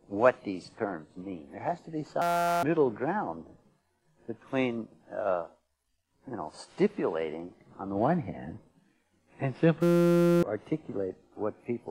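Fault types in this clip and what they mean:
System hang loop: the system froze while the hardware kept replaying one 5.8 ms buffer, giving two bursts of steady 172 Hz buzz, which fits a 256-sample buffer.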